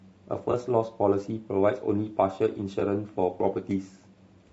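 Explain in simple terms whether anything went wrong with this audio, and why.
Two things went wrong. The speech throughout has a rough, grainy texture, with a hiss between the tones of the voice and a top end that sounds thin and artificial. That points to low-delay AAC compression, likely the AAC-ELD codec used for video calls. To keep delay down, it chops the sound into very short slices. Those short slices can't capture the fine tonal detail of a voice well, and at the data rate used here the damage is plainly audible.

The second problem is AAC frame loss with concealment, at 0.51 to 0.54 s and again at 2.79 to 2.82 s. Each time, one roughly 20 ms chunk of compressed audio never reached the decoder. The decoder filled the gap by reusing and scrambling the last good chunk it had. The result is a brief smeared, noisy blip rather than a clean dropout, and the speech resumes straight after each one.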